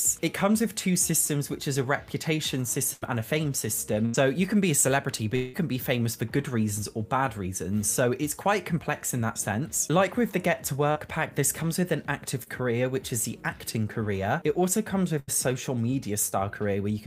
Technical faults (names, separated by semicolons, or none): burst of packet loss; long network dropout; short concealed packet loss